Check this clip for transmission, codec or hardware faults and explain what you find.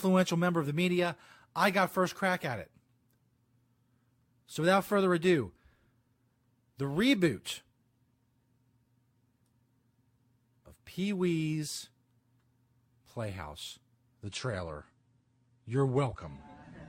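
From 14.23 s to the end at 16.89 s, the speech suddenly turns duller, with nothing above about 9.8 kHz and more codec artefacts. There is no dropout at the changeover. That pattern is an adaptive stream at a lower bitrate: the connection slowed, so the player switched seamlessly to a cheaper AAC encoding of the same stream. The loss of treble and the added artefacts fit a drop from around 96 kbit/s to around 32 kbit/s.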